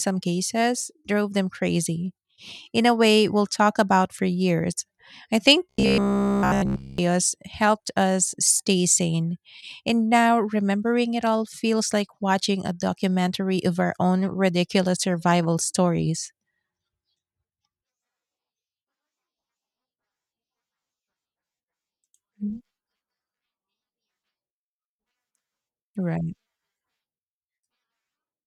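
From 5.69 to 6.98 s, speech becomes a rigid metallic buzz at 66.7 Hz. This is robotic sound from repeated short buffers, likely one 15 ms chunk looping.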